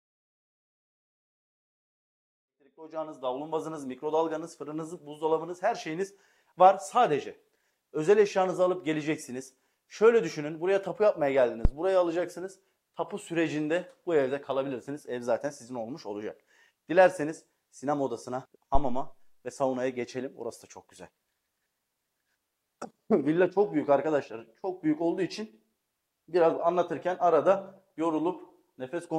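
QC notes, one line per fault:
11.65–11.71 and 18.75–19.21, phantom power thumps: a supply getting switched on a live input, with the step pushed through the coupling caps. The first is a short knock that dies in about 15 ms, and the second is a thump ringing out over about 103 ms.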